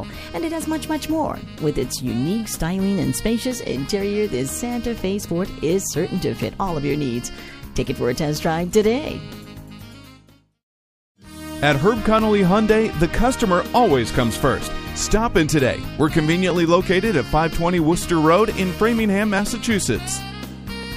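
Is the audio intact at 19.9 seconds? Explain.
No, clock drift buffer slips run from 0.66 to 20.83 s: clicks recur every 1.44 s, likely from two mismatched clocks dropping or repeating small sample blocks.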